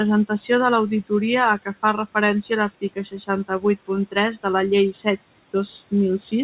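Speech cut by the noise suppressor occurs from 1.65 to 2.16 s, 2.69 to 3.29 s and 3.45 to 3.9 s. The suppressor mistook quiet speech for the room noise, which sits about 21 dB below speech, and pulled it down by about 12 to 15 dB. Syllables sound swallowed. The waveform shows dips, and the spectrogram shows faded patches below the 4 kHz ceiling of the call codec.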